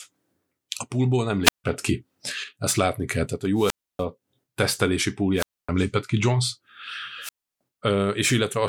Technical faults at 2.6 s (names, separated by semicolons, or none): none